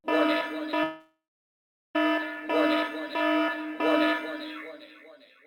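A call audio freeze runs from 0.83 s to 1.96 s. The sound stalls, and the last moment before the stall is stretched into a fading buzz that dies away, leaving about 0.74 s of silence. The likely cause is packets held up in transit, draining the jitter buffer. When the audio resumes, it picks up exactly where it stopped, so nothing is lost, but everything after lands about 1.1 s later than it should.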